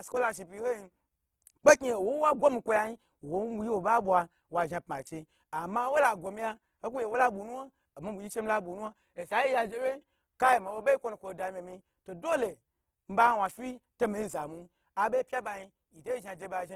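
From start to finish the speech sounds grainy and rough, with a noisy, fizzing texture laid over the voiced sounds, while the top end stays open and fullband rather than muffled. This is likely Opus compression in its music-oriented CELT mode, starved of bits at a rate that fits roughly 16 kbps: the encoder preserves each band's energy but fills the detail with folded or noise content, which is what makes the tone turn coarse.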